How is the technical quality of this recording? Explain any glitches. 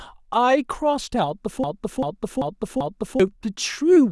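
There's one clear glitch here, a broken-record loop from about 1.64 s to 3.20 s. A 0.39 s slice of the speech plays four times back to back, identical each pass, so it stutters mechanically instead of moving on. The likely cause is the player or stream stalling and re-sending the last chunk it had buffered. Whatever speech belonged in that stretch is gone, and the audio just picks up again after the repeats.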